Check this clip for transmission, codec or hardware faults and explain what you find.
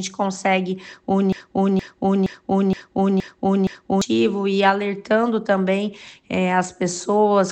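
One fault is present. From 1.33 to 4.02 s, a broken-record loop: a 0.47 s fragment repeats six times back to back, likely from a stalled player or stream, losing the original audio.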